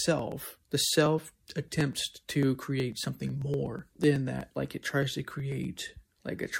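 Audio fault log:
0.07–6.51 s, periodic USB or driver dropouts: roughly every 0.124 s, around fifty times across the speech, a sliver of about a millisecond goes missing and the audio on either side is butted together. Each splice leaves a small step in the waveform that is heard as a regular tick, audible only while there is signal. On a spectrogram these show as thin vertical broadband lines at an even spacing, and in the waveform as abrupt discontinuities.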